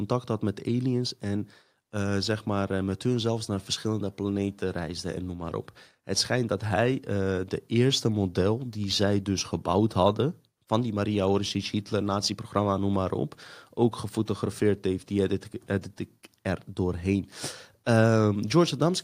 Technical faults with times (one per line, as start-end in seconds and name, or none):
none